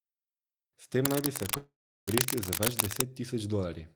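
From 1.05 to 3.02 s, cable scratch noise, likely a worn connector being moved, adds rough rustling about as loud as the speech, seen as ragged broadband smears. At 1.57 s a call audio freeze, likely from delayed packets, stretches the last sound into a fading buzz or hiss, then about 350 ms of flat silence, before the speech resumes at 2.09 s with nothing lost.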